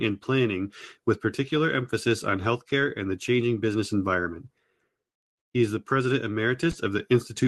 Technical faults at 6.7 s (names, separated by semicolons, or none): short concealed packet loss